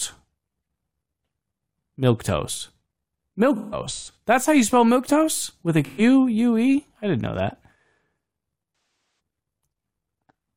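AAC frame loss with concealment hits at 3.55–4.17 s (scattered gaps, longest about 150 ms), at 5.85–6.01 s and at 9.15 s: the decoder patches missing frames from the last good spectrum, leaving smeared, phasey speech rather than the clean silence of a plain dropout, while the 512 ms loss at 9.15 s decays to a very faint noise floor and fades back in.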